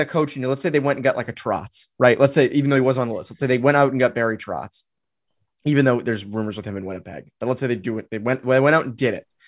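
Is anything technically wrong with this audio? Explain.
No technical faults are audible.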